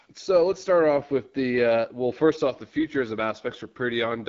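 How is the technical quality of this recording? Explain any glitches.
The speech is compromised throughout by AMR wideband (HD Voice) codec damage. Low-rate AMR-WB coding models the voice with pulses and shaped noise rather than preserving the waveform, leaving a rough, raspy texture that fits the 8.85 kbit/s mode, with nothing above 7.1 kHz.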